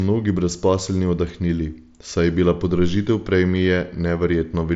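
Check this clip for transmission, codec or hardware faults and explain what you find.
No transmission, codec or hardware faults are present in this speech; its spectrum ends at about 7.7 kHz with the light graininess typical of the wideband mSBC Bluetooth headset codec.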